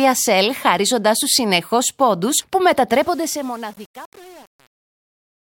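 From 2.93 s, just after "σου συνεχώς πόντους που", the fade-out that begins around 3 s shows truncation distortion on a fade. The level stage keeps too few bits, consistent with roughly 7, and adds no dither, so the decaying speech coarsens into gritty square steps through the end.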